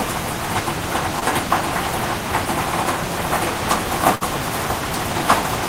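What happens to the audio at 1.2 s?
A brief smear cuts into the sound from 1.19 to 1.23 s. This is short concealed packet loss: a gap consistent with one lost 20 ms packet was covered by extending the preceding sound for about 18 ms, then crossfading back into the real audio.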